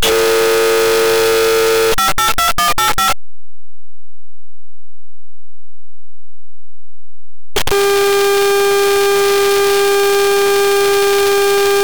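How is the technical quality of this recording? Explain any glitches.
Pretty rough, honestly. There's one serious problem running the whole length of the recording, and it dominates everything you hear.

The fault is a signed and unsigned mix-up, likely in how the 8-bit samples were read. Flip the top bit and every pass through zero turns into a leap from one end of the range to the other. So the sound comes out as loud, harsh, buzzy distortion from start to finish, with quiet stretches blasting as hard as the busy ones. The 8-bit depth itself is fine; it's just being decoded with the wrong sign convention.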